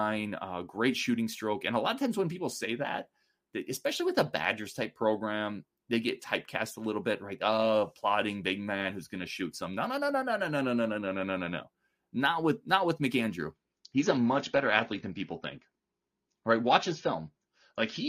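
From 13.54 s to the end of the clip, the speech switches abruptly to an adaptive stream at a lower bitrate: nothing survives above 6.9 kHz, the top end turns dull, and it fits a drop from roughly 96 to 24 kbit/s AAC with no gap.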